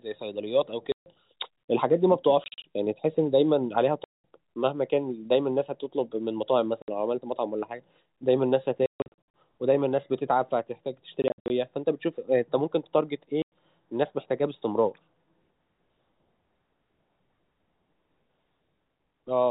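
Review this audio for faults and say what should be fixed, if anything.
Packet loss filled with silence leaves hard-edged holes in the speech at 0.92, 2.44, 4.04, 6.82, 8.86, 11.22 and 13.42 s. Each totals 60 to 360 ms in 20 ms steps, which fits 20 ms packets. Receiver-side packet loss concealment would fill these gaps.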